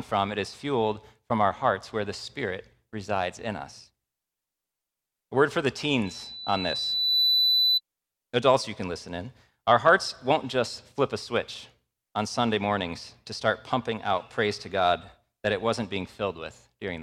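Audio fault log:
6.05 to 7.81 s, loudspeaker feedback squeal: a 4 kHz tone swells over about a second to roughly 5 dB above the speech, as mic-to-speaker loop gain exceeds unity there.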